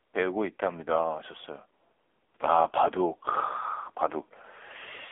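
AMR narrowband mobile codec damage runs through this speech clip from start to finish: everything above about 3.7 kHz is gone, the band sits near 300 Hz to 3.5 kHz, and heavy buzzy, synthetic coloration fits a low mode around 6.7 kbps.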